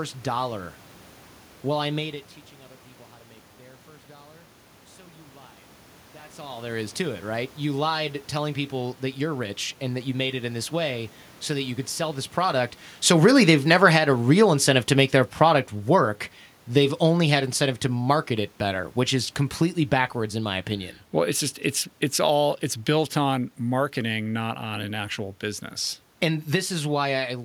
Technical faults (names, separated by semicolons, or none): automatic gain falling